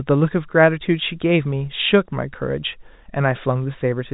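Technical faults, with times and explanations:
No faults turn up anywhere in this speech clip; it's simply carried over G.711 telephone coding, so the sound stops at about 3.8 kHz as you'd expect from a phone line.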